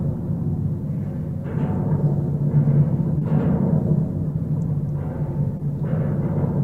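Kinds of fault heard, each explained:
Short concealed packet loss: Three brief stretches of audio failed to arrive in time, around 3.18 to 3.22 s, 4.32 to 4.35 s and 5.57 to 5.67 s, and the receiver filled each gap of 20 to 30 ms by extending the preceding sound before blending back in. The third also gains a little extra time. Each is heard as a short smear or wobble. On a spectrogram, the detail briefly freezes or blurs. On the waveform, a repeated or flattened patch appears.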